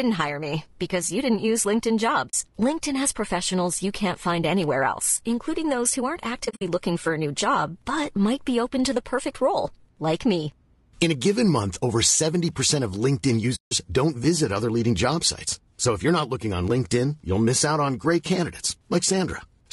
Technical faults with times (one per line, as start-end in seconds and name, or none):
0.00-19.72 low-delay AAC compression
2.29-2.34 AAC frame loss with muting
6.45-6.62 AAC frame loss with muting
13.55-13.72 AAC frame loss with muting